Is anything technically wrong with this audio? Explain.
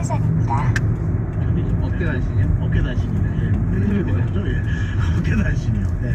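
No, nothing stood out as technically wrong on listening to this audio.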